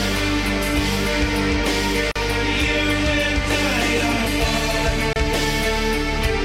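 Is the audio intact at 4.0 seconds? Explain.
Yes, the music plays through cleanly at 4.0 seconds, with no dropout, click or other disturbance at that point.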